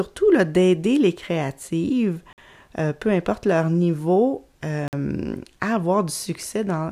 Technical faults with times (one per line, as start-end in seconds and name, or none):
2.33-2.38 gap between chunks
4.88-4.93 gap between chunks